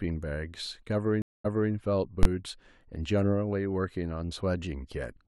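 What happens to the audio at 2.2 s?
At 2.23 s the speech breaks into a single loud bang lasting to 2.25 s, about 21 ms. This is invalid numbers at full scale: a calculation in the processing chain produced infinite or invalid values, which were clamped to the largest positive or negative sample value, so the output sits flat at one extreme value, far beyond the speech peaks, for one processing block. The 21 ms span fits a 512-sample block, and the block is too short to hear as separate pops.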